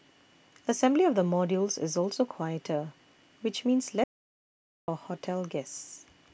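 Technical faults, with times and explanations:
4.04 to 4.88 s, audio dropout to silence: the input was likely lost for about 0.84 s, perhaps a disconnected device or failed link, while recording carried on writing silence. The speech cuts off abruptly into silence with no room tone, then resumes mid-flow, and whatever was said in that gap is gone.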